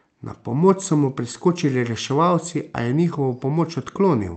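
No technical faults are audible.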